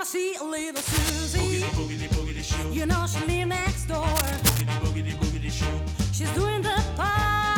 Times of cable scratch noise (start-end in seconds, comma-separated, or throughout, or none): 0.75-1.10, 4.07-4.61